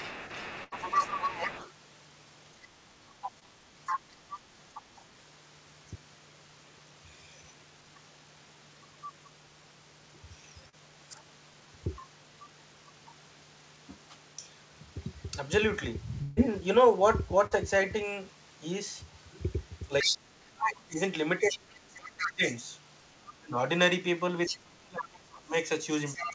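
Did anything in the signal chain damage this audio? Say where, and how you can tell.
Yes. The damage sits in call processing and the network.

Other side's voice leaking through: a second voice sits under the talker from 0.00 to 1.72 s at about 10 dB down, then from 3.23 to 5.01 s and from 20.01 s to the end at about 5 dB down. An incomplete echo canceller is the likely cause.

Burst of packet loss: at 0.64 to 0.74 s and 16.23 to 16.39 s the sound freezes into a held, fading tail. It then jumps ahead. About 80 ms and 140 ms are missing. The receiver stretched the last audio to cover a network gap.

Speech suppressed in double talk: the talker's level dips by about 10 dB at 2.54 to 2.73 s. From 20.02 s to the end it is pushed down far harder, at worst by roughly 30 dB, while the leaked voice plays. Echo suppression clamping both sides is the likely cause.

Short concealed packet loss: brief smears at 3.40 to 3.43 s, 10.69 to 10.75 s and 17.47 to 17.53 s. 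Each covers a 20 to 40 ms hole. The decoder continued the last sound, then blended back. These come from network loss inside a call path that cuts off at 8 kHz.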